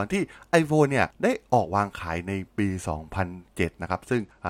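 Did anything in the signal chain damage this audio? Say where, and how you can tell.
Yes. From 4.18 s to the end of the clip at 4.50 s, the speech suddenly loses its treble and turns dull, with a gritty, grainy noise riding on it. That points to the codec stage, specifically a Bluetooth SBC bit pool drop. The sender cut the bits per frame, which fits a fall from a bit pool of 31 to 11, near 83 kbps. The highest sub-bands then get almost no bits, and the remaining bands are quantised coarsely.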